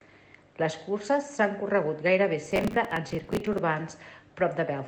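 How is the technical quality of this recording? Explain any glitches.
The recording has one clear glitch: a burst of processor overload crackle from 2.45 to 3.58 s, just after "curses s'han corregut gairebé". The processor fell behind and missed a run of short audio deadlines, likely a few dozen buffers of around 10 ms each. Each missed slot was filled with stale audio, so hard-edged repeated fragments pile up into a gritty, tearing crackle over the speech until the load eases. The call path's codec limits the top end to about 8 kHz.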